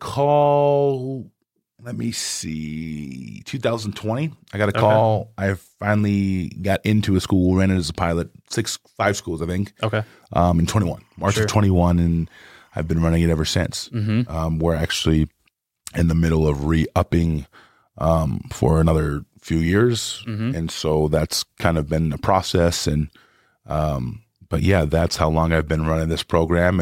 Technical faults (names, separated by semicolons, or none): timecode bleed